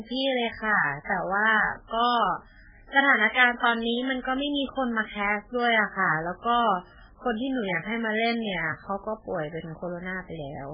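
Speech clip with heavy MP3 compression throughout: nothing above 5.1 kHz, watery swirling on quieter detail and chirpy s sounds, likely from a very low bitrate around 8 kbps.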